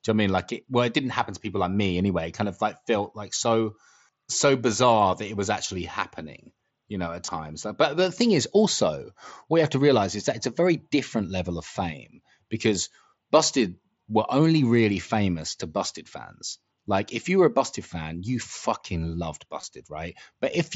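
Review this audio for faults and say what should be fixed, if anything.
Concealed Bluetooth headset packet loss occurs twice. Voice packets from the headset to the phone failed to arrive, and the receiver filled each gap by repeating the best-matching recent stretch of waveform. This happens at 7.26 to 7.28 s, right after "happening you know at", and at 19.61 to 19.63 s, after "fan you fucking loved". Each time 22.5 ms is patched, which fits three lost frames. Each patch is short, so it comes through as a brief buzzy smear in the mSBC wideband audio, with a slight warble as real audio resumes. Keeping the headset close to the phone, with a clear path and away from crowded 2.4 GHz traffic, would prevent these dropouts.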